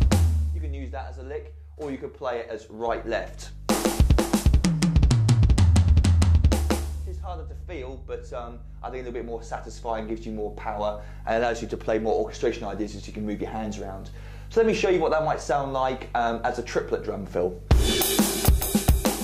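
From 2.88 s to the end of the clip, mains hum sits under the sound: a steady 50 Hz tone at roughly 20 dB below the signal, produced when the power line couples into the audio path through a ground loop or a nearby transformer.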